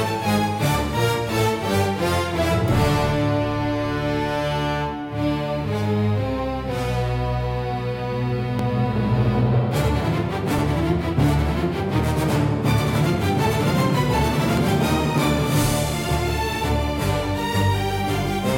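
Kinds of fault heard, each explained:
Overlap between stream segments: the time stamps of adjacent 2.0 s segments claim the same stretch of time, so the player discards the apparent duplicate even though that sound was never actually repeated. A sliver of roughly 15 to 20 ms goes missing and the waveform jumps across the gap, heard here as a brief click or tiny skip at 8.59 s and again at 14.57 s, both falling on segment boundaries.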